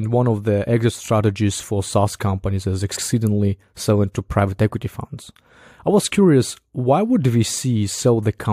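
Repeated frames occur at 1.05 s, right after "one of the exit", and again from 2.95 to 3.02 s, after "companies is". In each case a short block of compressed audio is decoded twice, so the speech jumps back and replays that slice. The first repeat is 23.2 ms long, which fits a single 1024-sample frame at 44.1 kHz. The second is 69.7 ms, consistent with three such frames. Both are heard as brief stutters, and together they lengthen the clip by about 93 ms.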